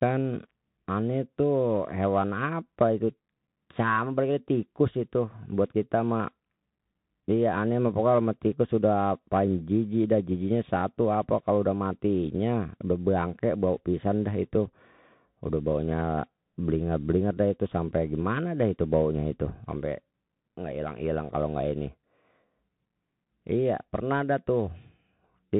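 Throughout, Bluetooth CVSD headset codec damage: the one-bit slope coder, fitting a 64 kbps link, misses fast transients. It leaves scratchy sibilants, granular hiss, and a spectrogram empty above 3.8 kHz.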